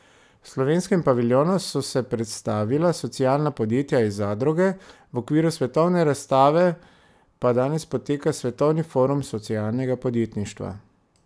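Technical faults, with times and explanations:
No technical faults heard anywhere in the speech recording.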